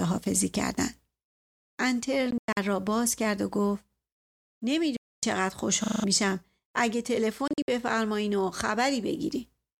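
At 2.31 to 2.57 s the speech breaks into abrupt silent gaps totalling 160 ms, the longest 0.10 s. This is likely a Bluetooth dropout, with packets arriving too late and being discarded. The same happens as one solid 0.26 s hole at 4.96 to 5.23 s, and as scattered gaps at 7.48 to 7.68 s totalling 130 ms, the longest 58 ms. Each time the speech resumes further on, as if it had kept playing.

At 5.84 to 6.04 s a system hang loop occurs. The hardware replays one 40 ms buffer five times while the system is frozen, giving a 25 Hz machine-gun stutter in place of roughly 0.2 s of audio.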